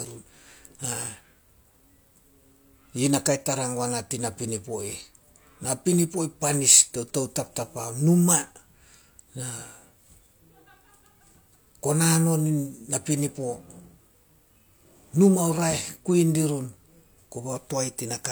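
No technical faults can be heard anywhere in the speech recording.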